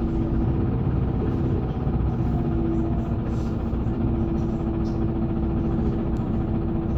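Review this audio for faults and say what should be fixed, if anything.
At 0.43 s and again at 5.58 s the sound lurches forward with a brief smeared blip, not a sharp click. These are compressed frames skipped. Whole frames, each about 26.1 ms (which fits a typical MP3-style frame), were missing or rejected as damaged by the decoder. Roughly 30 frames, about 0.7 s, are lost at the first jump, and around five frames, about 0.15 s, at the second. Overlapping neighbouring frames blur each join. To prevent this, re-encode or re-transfer from an intact source and verify the file's integrity so no frames are dropped.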